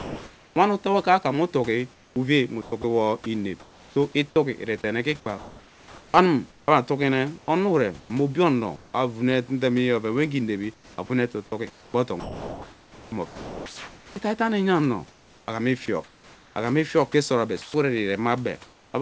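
From 0 to 0.56 s and again between 1.94 and 3.96 s, comfort noise in place of the background: pauses likely went untransmitted, and the receiver filled 0.7 s of the second stretch with synthetic hiss. The spectrogram shows a smooth, featureless floor, about 1 dB quieter at the start and about 31 dB below the loud parts.

At 2.82 to 2.84 s, sound dropped by the voice detector: the detector likely mistook a quiet fragment for background, so 20 ms of speech becomes steady noise. It appears as a thin gap in the waveform, filled with flat texture.

From 5.38 to 8.94 s, 10.74 to 14.16 s and 15.08 to 17.74 s, speech is chopped by the voice detector, likely switching transmission on and off repeatedly. About 1.3 s, 2.3 s and 1.1 s are replaced in turn, so syllable edges clip. The spectrogram alternates between detailed background and uniform comfort-noise patches, and nothing is present above 8 kHz, which fits a G.722 call path.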